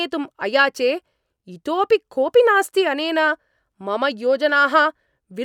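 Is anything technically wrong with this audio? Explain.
No, there is nothing technically wrong with this recording.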